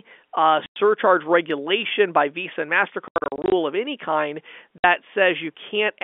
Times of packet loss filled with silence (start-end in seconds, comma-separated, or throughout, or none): 0.66-0.76, 3.08-3.52, 4.78-4.84